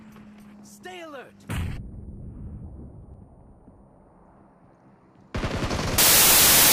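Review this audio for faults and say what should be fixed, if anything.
From 5.98 s to 6.73 s, the sound turns into loud noise with the original buried, running 1.5 times fast. This is a wrong sample width: 16-bit data read as packed 24-bit. Fix it by reading the stream with the same sample format it was written in, checked against the header.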